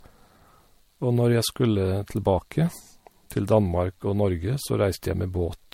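From start to finish the speech carries generation loss, most likely from an MP3 chain run at 64 kbit/s and encoded around four times over. Each new pass quantises on a shifted frame grid, so noise and spectral holes accumulate rather than cancel. The result is a swirly, hollow, smeared quality worse than one 64 kbit/s pass would give, with blurred consonant attacks and nothing above 16.6 kHz.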